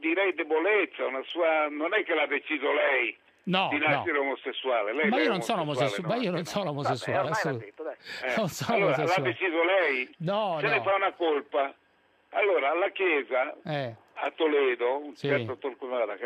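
Nothing stood out on listening; no technical problem could be heard anywhere in the audio.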